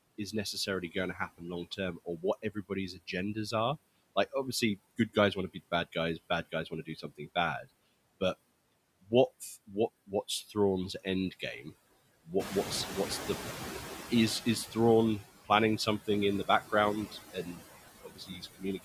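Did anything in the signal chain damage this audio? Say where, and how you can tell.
Yes, call processing did. Throughout, the background dips between phrases and swells beneath them. These are noise suppressor artifacts: band-by-band gain cuts the steady noise by about 19 dB.

Soft consonants and word endings sound swallowed at 0.18–3.53, 4.98–5.96, 6.52–7.65, 9.67–11.72 s and from 13.87 s to the end. That is speech cut by the noise suppressor, with drops of about 12 to 18 dB.

When the room noise jumps by about 12 dB near 12.5 s, it comes through only partly reduced from 12.39 to 14.63 s. The noise suppressor is catching up, taking 2.24 s to adapt.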